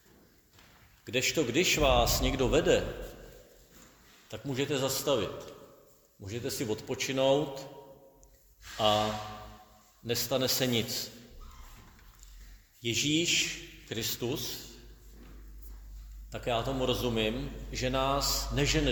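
No technical faults are audible.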